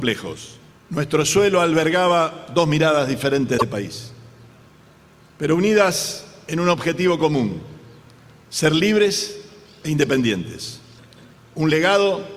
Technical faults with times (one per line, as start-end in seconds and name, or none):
3.57-3.62 broken MP3 bit reservoir